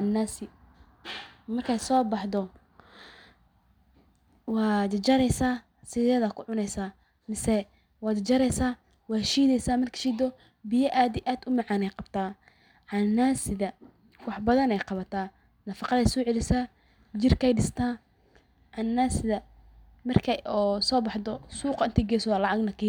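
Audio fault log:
0.0–16.0 s, block size mismatch (truncated): the tail of each block is discarded, so the speech buzzes at 91.9 Hz with its pace and pitch unchanged. The waveform shows regular discontinuities about 11 ms apart, and the spectrogram shows vertical striping with 91.9 Hz harmonics.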